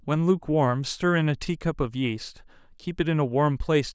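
No technical faults can be heard in this speech recording. There is no point in the audio that calls for comment.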